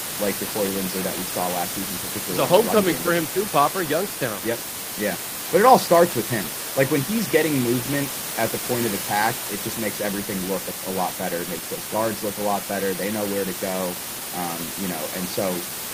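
No technical faults are present.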